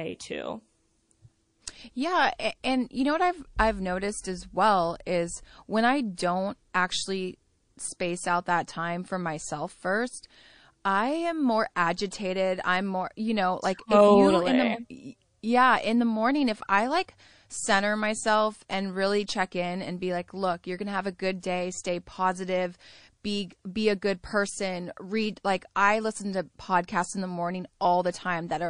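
A watery, swirling quality hangs over the speech from start to finish, with the top end dulled and fricatives smeared into a metallic fizz. That is plainly audible MP3 compression, likely from a low bitrate around 40 kbps. With so few bits, the encoder cuts off the treble and drops weaker frequency components that flicker on and off from frame to frame.

Pre-echo appears twice. From 6.15 to 6.18 s, between "well is when I" and "actually space out that", a hiss of about 26 ms rises roughly 12 dB ahead of a sharp onset, which then lands softened. The same happens from 21.40 to 21.43 s, between "gonna have a good" and "day stay positive be", with about 27 ms of hiss rising roughly 10 dB. In both places the encoder held its 52 ms long block rather than switching to short ones, so quantisation noise meant for the loud attack spread into the quiet moment before it.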